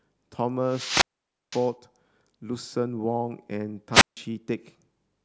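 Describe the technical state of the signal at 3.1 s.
At 3.1 s the speech signal is intact, with no audible dropout, clipping, distortion or other technical fault.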